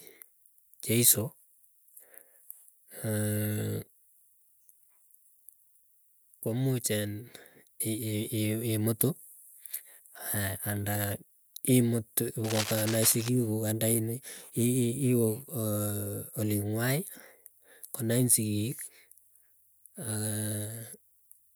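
A speech recording with one fault: a worn or loose cable, connector or control was likely moved between 12.44 and 13.28 s, so its contact resistance jumped about rapidly and modulated the signal path. The result is cable scratch noise, a dense, ragged burst of crackling and rustling laid over the speech for just under a second, sitting only around 10 dB below the speech level.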